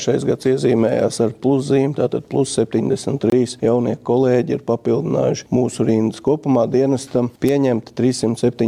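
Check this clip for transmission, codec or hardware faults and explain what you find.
One fault: a gap between stream segments from 3.30 to 3.32 s, where mismatched segment timestamps leave a hard-edged hole of about 24 ms of silence, with no audio lost.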